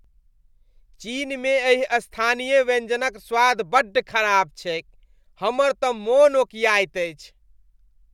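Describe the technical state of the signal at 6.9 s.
At 6.9 s the speech signal is intact, with no audible technical fault at that moment.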